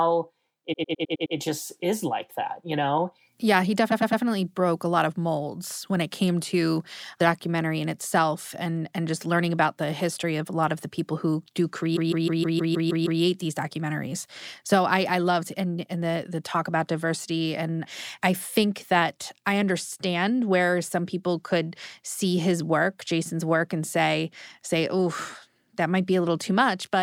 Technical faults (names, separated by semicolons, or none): repeated frames